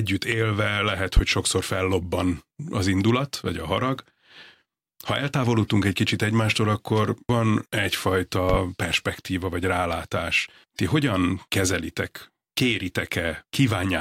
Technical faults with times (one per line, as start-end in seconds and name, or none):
1.17-1.21 loud pop
8.49-8.57 loud pop